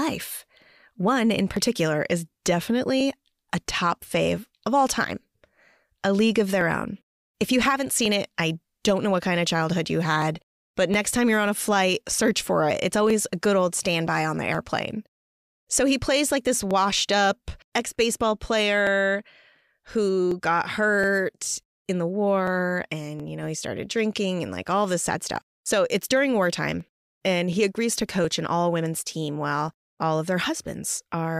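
A speech recording carries a regular tick from 0.12 s to 31.13 s, recurring every 0.72 s, some forty in all. These are clock drift buffer slips: two devices likely run on separate clocks differing by roughly a tenth of a percent, so the buffer between them creeps until a short block of samples, on the order of a few tens, is dropped or repeated. Unlike random dropouts or packet-loss glitches, the spacing stays strictly even.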